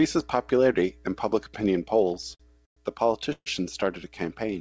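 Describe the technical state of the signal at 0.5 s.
At 0.5 s the speech is intact, with no dropout, glitch or distortion, only the ordinary coding of the call path, whose G.722-style band limit leaves nothing above 8 kHz.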